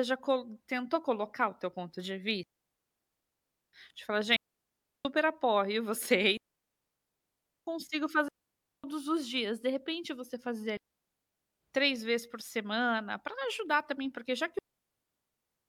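Digital wireless dropouts mute the speech at 2.43–3.73 s, 4.36–5.05 s, 6.37–7.67 s, 8.28–8.84 s (before "os dias"), 10.77–11.61 s (after "repente você fazer") and 14.59 s to the end (after "também porque já que"). Each time the receiver lost too much data and muted, leaving clean near-silent holes of 0.55 to 1.3 s, with very short fades and no noise bursts.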